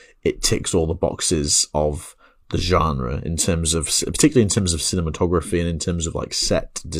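No technical faults can be heard anywhere in this recording. The speech comes through steadily from beginning to end, with nothing to flag at any point.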